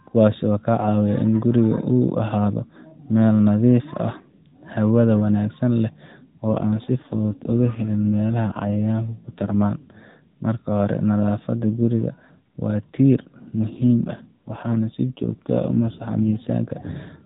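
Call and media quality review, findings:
AMR rate drop, 6.5–9.6 s and 13.7–16.5 s: speech turns rougher and more synthetic, with no gap and no change in band. The AMR-NB mobile codec steps down from its normal rate, consistent with 12.2 to 5.9 kbps, spending bits on error protection over a weak radio link.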